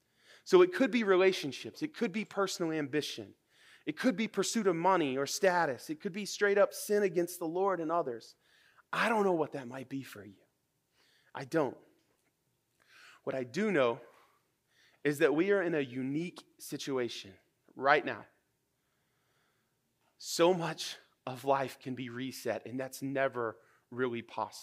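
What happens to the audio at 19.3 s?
At 19.3 s the speech carries on intact, with no dropout, click, distortion or other fault.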